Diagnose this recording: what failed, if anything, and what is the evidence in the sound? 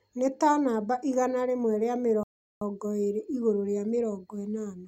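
A rebuffering stall at 2.23 to 2.62 s, at the playback stage: the speech drops into silence for about 0.38 s, then picks up exactly where it broke off. The player's download buffer ran dry and waited for data, adding time without losing any audio.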